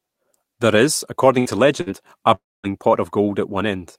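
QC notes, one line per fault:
1.39–1.48 s and 1.81–1.89 s, burst of packet loss: each time about 60 ms of speech goes missing. The receiver stretches the last sound for roughly 55 ms as a held buzz or hiss that fades, then playback jumps ahead past the lost stretch.
2.34–2.66 s, long network dropout: the last sound is held and dies away, leaving about 230 ms of silence before speech returns with about 300 ms missing. This is likely a stretch where no packets arrived, and the receiver filled it with a decaying continuation of the last sound.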